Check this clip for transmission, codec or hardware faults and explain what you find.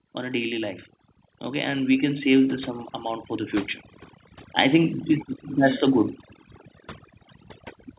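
Two faults stand out here, one running the whole way through and one brief swell early on, all heard through a narrowband call path that stops around 4 kHz, which fits G.711.

Overdone noise removal, throughout: the noise suppressor was set too aggressively, gating bands near its noise estimate, so the background drops to twinkly near-silence.

Automatic gain rising, from 1.52 to 3.60 s: the AGC decided the input was too quiet and ramped up about 6 dB, so speech and background swell together over those two seconds.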